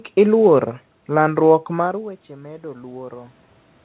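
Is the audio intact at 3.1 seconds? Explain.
No. At 3.1 s the speech and the background noise are both swelling together, part of an automatic gain rise from 1.74 s to 3.4 s. The input fell by about 20 dB when the talker moved back, and the gain control is slowly adding about 6 dB to compensate.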